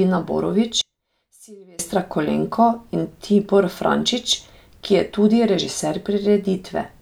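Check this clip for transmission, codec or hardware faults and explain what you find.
One fault is audible, a stretch where the speech nearly disappears. From 0.81 to 1.79 s the level falls by about 30 dB, the likely cause being one channel inverted. With one stereo side's polarity flipped, the centred speech cancels when the two sides are summed to mono. Only a faint residue of their small differences survives. That residue separates it from a dropout or mute, which would leave true silence, and from a gain fault, which would keep the full tone.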